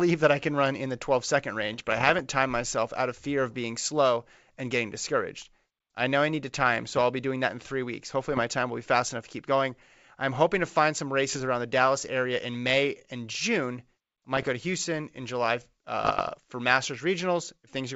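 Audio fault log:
1.73–2.20 s, 6.75–7.01 s, 8.33–8.43 s, 11.33–11.43 s, 14.37–14.49 s, 16.02–16.36 s: bit errors on an ADPCM link, rough pops with brief level jumps that ring on rather than dropping out, as each flipped bit derails the decoder's step size and predictor.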